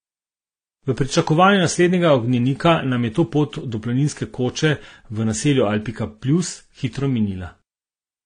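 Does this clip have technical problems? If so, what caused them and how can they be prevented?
Yes. Throughout the speech the sound is dull, with nothing above 9.7 kHz, and carries a layered mix of swirly, metallic artefacts of differing character. The cause is likely transcoding between lossy codecs. The mixed textures suggest several lossy encodes in a row, each spending bits on the previous codec's damage while adding its own, with the lowest cut-off surviving. To prevent it, encode only once, from a lossless master, at an adequate bitrate.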